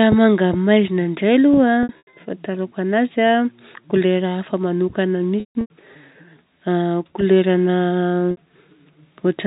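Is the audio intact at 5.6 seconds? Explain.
No. At 5.6 seconds the clip sits inside a packet loss with pitch repetition event running from 5.4 to 5.7 s. About 240 ms of audio is missing, scattered across that 300 ms span, which points to a run of roughly 30 ms packets. The receiver bridged each hole by replaying the last pitch period and fading it over about 50 ms. Brief holes give a held, buzzy tone. The longest run, 150 ms, outlasts the fade and drops to silence before the speech cross-fades back in.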